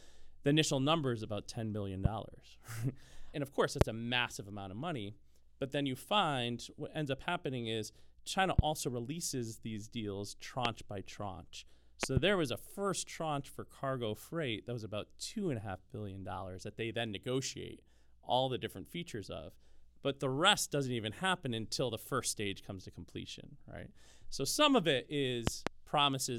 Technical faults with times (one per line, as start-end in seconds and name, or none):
2.05-2.08 loud pop
3.81-3.84 loud pop
8.59-8.61 loud pop
10.65-10.68 loud pop
12.03-12.19 loud pop
25.47-25.69 loud pop